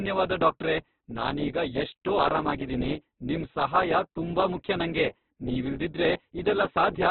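Opus compression at a very low rate, likely the cause, affects the whole recording: the speech is narrowband, with nothing above 4.4 kHz, and sounds heavily rough and grainy. The encoder appears to be in its music-style CELT mode, filling starved bands with folded or noise-like energy, which fits a rate around 8 kbps. Unlike MP3 damage, there is little swirling or watery warble; the harshness is a constant gritty texture.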